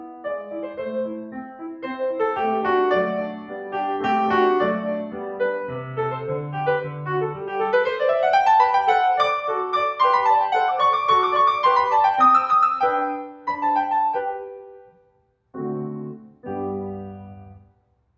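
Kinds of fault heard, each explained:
Noise suppressor applied to music, throughout: a suppressor built for speech mistakes the music's sustained tones, ambience and reverb for noise and turns them down. Attacks pass while held material sinks, so the level swings by roughly 5 dB and the sound pumps.
Sound cut by the noise suppressor, at 0.0–1.86, 3.31–3.73, 5.06–5.4, 7.35–7.51, 13.22–13.47, 14.35–15.55, 16.28–16.45 and 17.59–18.16 s: here sustained or decaying music is pushed down harder, by about 7–9 dB early and about 11 dB after 13 s, cutting tails short.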